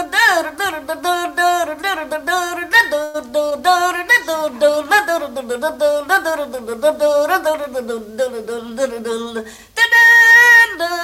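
A call audio freeze at 3.03 to 3.16 s stretches the last sound into a fading buzz or hiss for about 0.1 s, likely from packets held up in transit emptying the jitter buffer; the audio then resumes where it stopped, with nothing lost. A jitter buffer speed-up from 8.47 to 10.33 s runs the audio about 6% fast at unchanged pitch, as short pitch-period pieces totalling around a tenth of a second are cut to shrink the backlog.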